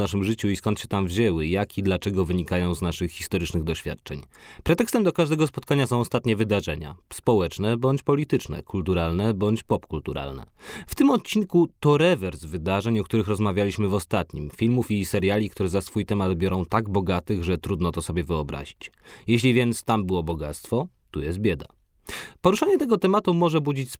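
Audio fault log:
15.87–15.89 s and 20.29–20.35 s: lost packet rebuilt from error correction. The first falls between "i seriali które za" and "temat biorą tak bogatych". The second comes just after "więc tam było". There is no gap at either point. Instead, the sound turns briefly rough and grainy. About 20 ms is affected first, then about 40 ms, which fits one and then two lost packets. The next packet carried a cheaper, low-bitrate copy of the missing audio, and the decoder played that copy.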